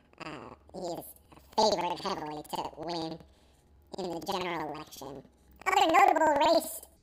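It's a speech clip with a case of planar audio read as interleaved running the whole way through. Each block of about 93 ms, which fits 4096-sample blocks, plays back twice at double speed, left then right, so the pitch sits an octave high with a flutter at around 10.8 Hz.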